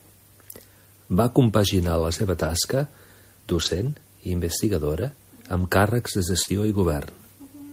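Speech in Catalan, with two related kinds of network damage. Lost packet rebuilt from error correction occurs four times: at 2.39–2.49 s just after "compaginar la seva", at 3.53–3.87 s, at 5.53–5.63 s, and briefly at 6.47–6.49 s after "càrrecs de". The longest stretch runs about 0.34 s. In each, the sound keeps going without a break but turns rough and noisy, because the decoder played a low-bitrate backup copy of each missing stretch carried in the following packet. That stretch length fits several consecutive lost 20 ms packets, each recovered this way. Short concealed packet loss sits at 6.43–6.49 s, also right after "càrrecs de". About 40 ms never arrived and no backup existed for it, so the receiver extended the preceding sound and faded back into the real signal, giving a brief smear or wobble. That smear is how to tell the two apart. The error-corrected stretches hold the real sound at reduced quality, while the concealed gap is an invented continuation that can swallow a short consonant. 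Here the concealed gap overlaps the final rebuilt frame at 6.47 s, so the smear runs straight into that last rough patch.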